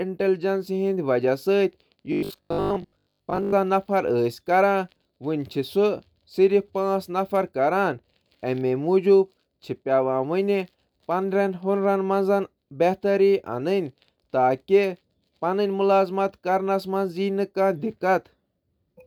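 From 2.12 to 3.54 s, robotic sound from repeated short buffers: the speech becomes a rigid 50 Hz buzz, likely from a 20 ms block looping.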